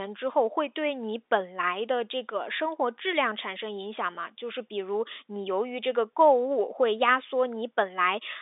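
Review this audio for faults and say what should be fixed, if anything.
Nothing needs fixing; no faults can be heard here.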